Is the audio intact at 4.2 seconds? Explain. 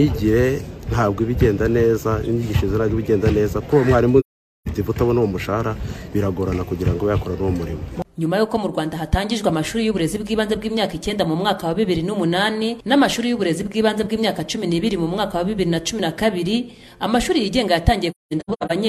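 No: AAC frame loss with muting silences 4.19 to 4.68 s. Zeroed spectra fade via overlapping windows, leaving a soft-edged hole rather than an abrupt cut.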